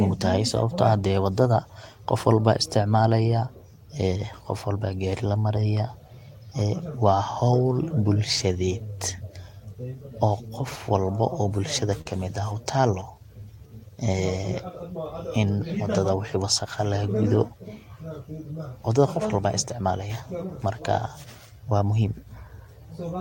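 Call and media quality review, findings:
Short stall from a late packet, 12.01–12.07 s, after "oo gofwalba o bulshadha": sound held about 37 ms, nothing lost. Jitter buffer ran dry; receiver stretched last sound until packet arrived. Spectrogram: flat, smeared harmonics; waveform: repeated cycles, slight dip.

Short stall from a late packet, 12.81–12.85 s: same mechanism, 15 ms fill, no loss. Brief held tone; waveform shows a few duplicated periods, spectrogram a narrow frozen band.

Jitter buffer slow-down, 13.14–13.68 s: audio at 94% speed, same pitch, 41 ms added to rebuild reserve. Receiver repeated pitch periods. Waveform: identical periods in sequence; spectrogram: stretched harmonics, unchanged spacing.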